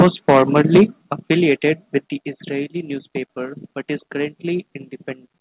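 Microphone overload, 0.0 to 0.82 s: the speech peaks flatten harshly and crackle, likely from input gain set about 7 dB too hot, clipping a noticeable share of samples. Microphone volume stepped down, at 1.02 s and again at 2.04 s: the speech and background each drop abruptly by about 6 dB, likely the call software cutting input gain after the overload. The band-limited sound, with nothing above 4 kHz, fits the G.711 call path.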